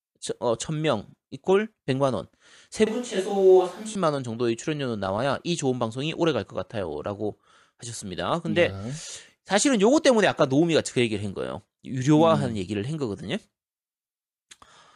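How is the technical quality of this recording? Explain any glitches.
The recording has one glitch. From 2.87 to 3.95 s, the speech turns roomy and hollow with less bass, then snaps back. It's likely a switch to a distant microphone, with the close mic's signal dropping out and a farther one taking over. The level stays about the same, and room noise sits roughly 30 dB below the speech.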